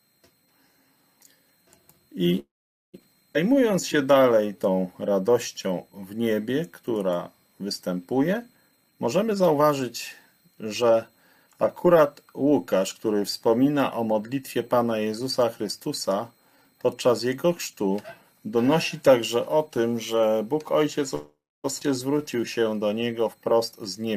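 At 2.39 s the sound stops and a short fading buzz gives way to silence until 2.96 s, a pause of 0.54 s with about 0.47 s fully silent. This call audio freeze was likely caused by packets held up in transit, so the jitter buffer ran dry. The receiver stretched the last sound briefly, then waited, and resumed where it left off with nothing lost.

At 3.34–3.36 s the audio jumps forward abruptly, and about 150 ms is missing. This skip ahead happened because a stretch of audio was dropped, in transit or by an overflowing jitter buffer, while later audio was already waiting, joining the two sides almost directly.

From 3.49 to 5.10 s the sound drags at 91% speed without any pitch change. This jitter buffer slow-down came from repeated pitch periods that added 151 ms to rebuild a reserve.

From 8.69 to 11.55 s it hurries along at 119% speed. This is a jitter buffer speed-up, in which short pitch-period slices totalling about half a second were cut to reduce excess delay.

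The same sequence recurs near the end. A call audio freeze runs from 21.15 to 21.66 s, lasting 0.49 s with about 0.28 s silent. A skip ahead at 21.80–21.83 s drops about 300 ms. A slow-down at 90% runs from 22.18 to 22.65 s and adds 55 ms. A speed-up at 109% runs from 23.34 s to the end and removes about 0.1 s.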